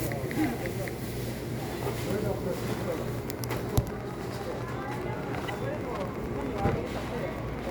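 A nearby Wi-Fi radio's beacon, repeating every 102.4 ms, is being picked up and rectified by the audio circuit. This Wi-Fi interference begins at 2.53 s and runs to the end as a steady ticking about ten times a second, roughly 20 dB beneath the sound.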